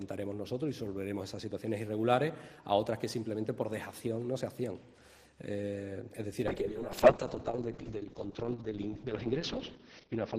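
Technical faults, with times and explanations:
6.48–10.38 s, call bitrate drop: the encoder's rate fell from 32 to 6 kbps, so the sound turns coarse and watery, with everything above 6 kHz cut off.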